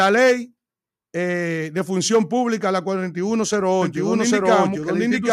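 From 3.82 s to the end, the audio carries a doubled audio track: a second full-band copy at about the same level trails the original by roughly 0.7 s, likely because the signal is being captured again through a slower path. Unlike an echo or room reflection, it is a single repeat with no decaying tail or added room colour, and it cuts in abruptly rather than building up.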